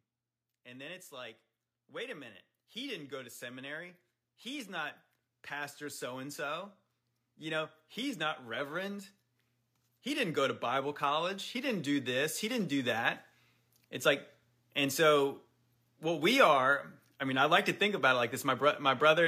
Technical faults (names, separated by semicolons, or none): automatic gain rising